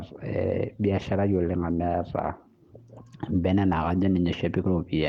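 Nothing in this speech stood out as a technical problem on listening.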